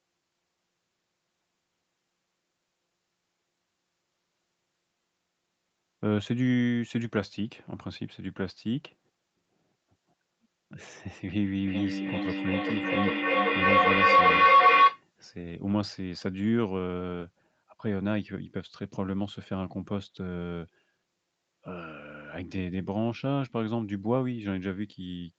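From 11.67 s to 15.04 s a feedback howl builds. The microphone-to-loudspeaker loop gains level on each trip, so it narrows to a tone around 1 kHz, with the loop repeating roughly every 0.4 s, and peaks about 11 dB above the speech. A spectrogram shows a bright line near 1 kHz, and the waveform swells.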